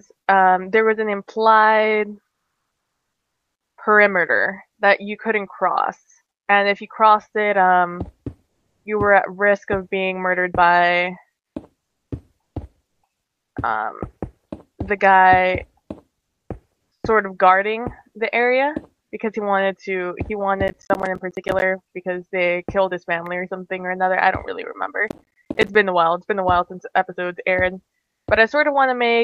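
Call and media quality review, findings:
Comfort noise in place of the background, 8.49–8.85 s and 27.99–28.27 s: real background becomes flat, featureless hiss, about 2 dB louder then about 6 dB quieter; likely Opus DTX. Spectrogram shows smooth uniform band.

Processor overload crackle, 20.68–21.62 s and 25.08–25.75 s: gritty tearing from dozens of missed deadlines, each a hard-edged silent dropout fitting roughly 10 ms buffers. Waveform shows dense notches; spectrogram, vertical streaks.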